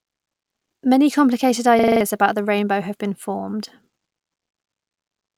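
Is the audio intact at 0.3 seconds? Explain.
Yes, the audio is intact at 0.3 seconds, with no dropout, click, distortion or other fault at that moment.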